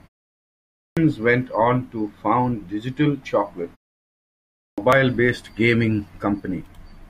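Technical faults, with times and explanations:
0.65–0.97 s and 4.44–4.78 s, clipped start after a pause: after silences of 0.65 s and 0.76 s, the output stays dead for about 0.32 s and 0.34 s, so speech bursts in abruptly with its opening sounds missing. The device had gone idle in the quiet and needed that long to wake. Unlike muted pauses, which would only drop the background between phrases, this swallows actual speech at each restart.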